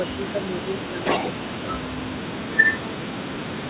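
It's a short speech clip where the talker keeps getting ducked, dipping by somewhere around 10 to 25 dB at 0–0.41 s, 0.62–0.67 s, 0.87–1.05 s, 1.85–2.18 s and from 2.41 s to the end, which sounds like speech suppressed in double talk, likely the far end talking over it. Right after, at 1.05–1.31 s, there's likely an echo leak: a copy of the voice delayed by 395 ms, a bit louder than the speech itself.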